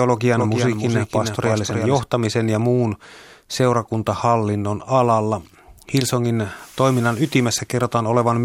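A doubled audio track runs from 0.37 to 2.01 s: a dry copy about 5 dB quieter trails by roughly 300 ms, likely from a slower second capture path, and cuts off abruptly before "ja muun seurakuntahallinnon alalla".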